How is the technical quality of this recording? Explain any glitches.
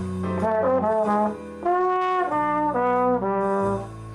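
No glitches can be heard anywhere in this recording, so there is nothing in its technical quality that needs explaining.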